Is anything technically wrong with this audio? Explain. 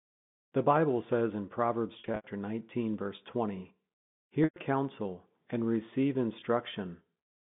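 Yes. Three short stretches sound held and buzzy, fading into silence where the gaps run longer. From 2.00 to 2.24 s, about 160 ms is lost in runs of up to 80 ms. From 4.44 to 4.56 s, 120 ms goes just before "counsel and receive". At 6.40 to 6.42 s, 20 ms drops just after "counsel and receive". This is packet loss with pitch repetition: the receiver looped the last pitch cycle across the missing packets, then faded it out. All of this sits within the 150 Hz to 3.6 kHz telephone band.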